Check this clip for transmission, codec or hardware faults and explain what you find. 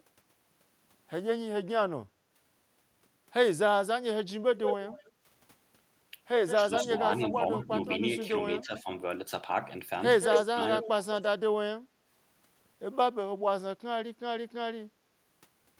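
Faults are present, all tied to echo cancellation on a speakerphone-style link.

Echo leak at 4.57 to 5.12 s, 6.47 to 8.61 s and 10.21 to 11.23 s: the canceller likely missed loudspeaker pickup, so a copy of the speech returns roughly 178 ms late, then 203 ms, at about -5, -10 and 0 dB relative to the speech.

Speech suppressed in double talk at 6.57 to 8.88 s and 10.34 to 11.17 s: with both sides talking, the canceller likely ducked everything, so the speech dips, by up to about 10 dB and then about 30 dB.

Background gated by the echo canceller at 11.81 to 11.92 s: the microphone was clamped hard, so the room sound drops out by about 10 dB for roughly a tenth of a second.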